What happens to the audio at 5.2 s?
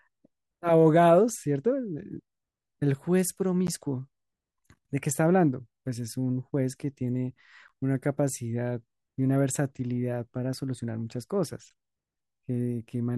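Nothing goes wrong at 5.2 s; the speech runs through that moment intact, with no dropout, click, distortion or other fault.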